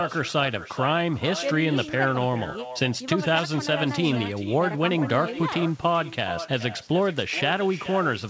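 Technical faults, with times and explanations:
Throughout: echo with no canceller. The speech returns as a thinner copy about 13 dB quieter, roughly 0.4 s later, because the far end's loudspeaker feeds its microphone and nothing removes it. Unlike room reverberation, it is a distinct delayed repeat, not a decaying tail.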